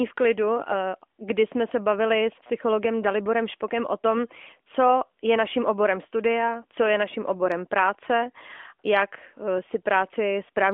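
No technical faults are present.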